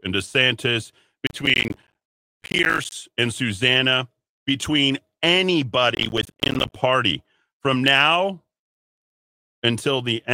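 From 1.27 to 2.92 s, and again from 5.95 to 6.76 s, the speech is overlaid with processor overload crackle. The processing could not finish its audio buffers on time, and dozens of deadlines were missed in a row. Each miss left a short hard-edged gap of silence, and the spacing fits buffers of around 10 ms. Strung together, these dropouts produce a gritty, tearing crackle that stops once the load eases.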